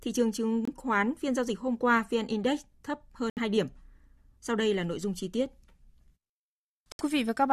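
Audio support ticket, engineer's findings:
Corrupt frame muted at 0.65 s (36 ms, just before "khoán phiên giao dịch"), 3.29 s (94 ms), 6.92 s (90 ms). Abrupt silent holes; damaged compressed frames rejected by the decoder and replaced with silence, timing preserved.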